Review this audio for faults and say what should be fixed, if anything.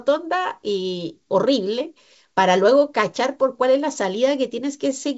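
No faults; nothing to fix.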